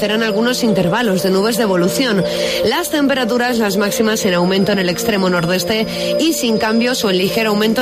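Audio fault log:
4.11 to 7.81 s, feedback whistle: a thin, steady tone near 5 kHz enters and holds until the end, sitting roughly 20 dB under the main sound and swelling and fading slowly in level. The likely cause is a loudspeaker-to-microphone loop whose gain has reached the edge of instability at that one frequency. The loop sustains the tone indefinitely without tipping into runaway howl, which is why it stays narrow, constant in pitch, and never builds into a howl.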